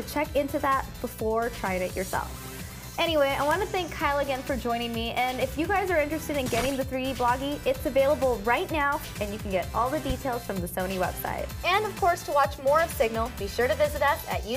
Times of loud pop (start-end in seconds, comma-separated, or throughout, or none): 10.10-10.13